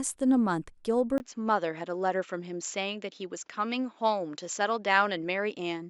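At 1.18 s the input likely switched to a poorer device. A 20 ms silence marks the change. From there to the end, the speech loses everything above 7.6 kHz and turns duller, at much the same level, with a faint new background noise.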